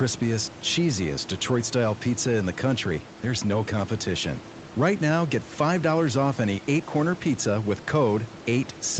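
No technical faults are present in this speech: the band stops at about 8 kHz, as expected from call microphone processing and a wideband Opus call path, and the room noise sits roughly 19 dB below the speech.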